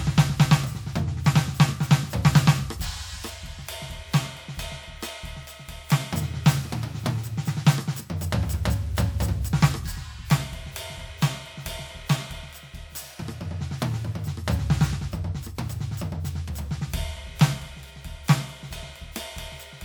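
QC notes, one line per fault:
No faults can be heard anywhere in this music clip. Nothing in it calls for a QC line.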